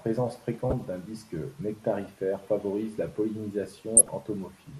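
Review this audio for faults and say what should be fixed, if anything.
The speech sounds dull and gurgling throughout, with a granular edge. This is likely MP2 compression at a low rate, which fits around 80 kbps, leaving upper sub-bands starved of bits. Re-encode from the original at a higher bitrate or with a more efficient codec.

Brief noise bursts come at 0.70 to 0.86 s, just before "d'un disque nectarifère favorise", and again at 3.96 to 4.09 s. This is DAB burbling: reception bit errors slipped past error correction and put short blips of noise into individual sub-bands across 8 and 6 frames. Improve the reception or take the feed from a clean source.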